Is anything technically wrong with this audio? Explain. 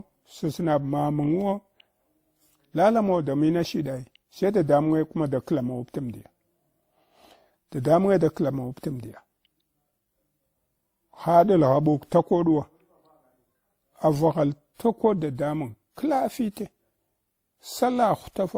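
Yes. Throughout the speech there is transcoding between lossy codecs. Two distinct kinds of artefacts are heard together, likely from a WMA-style encode that was re-encoded as Opus at a lower rate. A single codec pass would leave only one texture. Here the second encoder spends bits on the first one's damage and adds its own. Content still reaches about 20.2 kHz.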